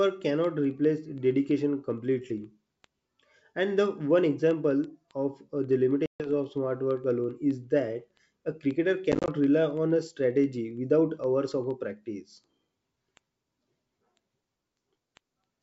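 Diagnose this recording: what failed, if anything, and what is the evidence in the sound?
Word clock ticks run from 0.11 s to 15.57 s. Sharp ticks of uneven strength repeat about every 70 ms, around two hundred in all. This is a digital-interface fault: the receiver is not locked to the sender's clock. The mismatch, roughly 300 ppm, drops or repeats one sample at each slip.

Packet loss on an ADPCM call occurs in the network and call-decoding stage. At 6.06 to 6.30 s there is a hard-edged 140 ms silence. At 9.12 to 9.29 s, 90 ms drops out in short gaps of up to 30 ms. After each gap the speech returns slightly distorted, until the decoder's predictor and step size recover. The G.722 stream at 64 kbit/s decodes normally around these gaps.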